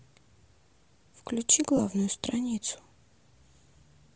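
Bluetooth LC3 compression runs from start to end of this speech and is plainly audible. The sound is most likely from the LE Audio transform codec at a low bitrate, which fits roughly 32 kbps with 10 ms frames. At that rate the encoder discards much of the upper spectrum and replaces it with shaped noise, so sibilants and the top of the speech take on a breathy, grainy texture.

Lost LE Audio frames cause a brief dropout from 1.77 to 1.79 s, a 20 ms gap that fits two missing frames. With no data arriving, the decoder rebuilds each missing frame from the last good spectrum with randomised signs. For this short stretch the speech is filled in from that reused spectrum, then snaps back to the normal coded signal once frames arrive again.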